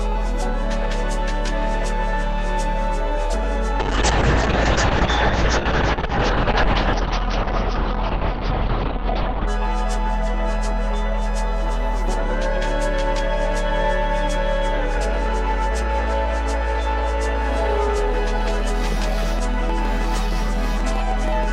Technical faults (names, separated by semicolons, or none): call bitrate drop; train of clicks